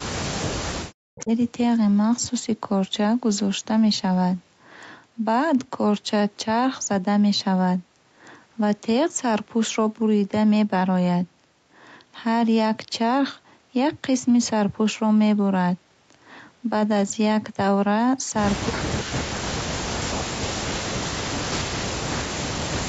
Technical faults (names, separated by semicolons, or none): speech suppressed in double talk; echo leak